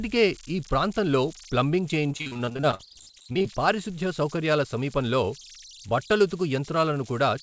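Converter idle tones run through the whole recording, about 21 dB below the speech. An undithered delta-sigma converter settles into repeating bit patterns, leaving a tone around 4 kHz.

From 2.12 to 3.46 s comes repeated packet loss with a robotic sound. Many short gaps, the longest 48 ms, are patched by extending the previous sound. About 43% of the stretch is concealed, so the speech turns choppy.

Nothing sounds above 8 kHz, which fits a wideband call codec such as G.722.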